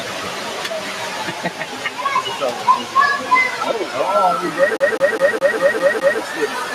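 From 1.31 to 1.64 s the noise suppressor misjudged part of the sound as noise and pulled it down by about 4 dB, so for roughly a third of a second the audio sags in level before recovering.

From 4.77 to 6.21 s a CD stuck on one turn, its laser jumping back to the same point each revolution, repeats a 205 ms slice of audio seven times, each pass broken by a brief mute, giving a rapid, evenly spaced mechanical stutter.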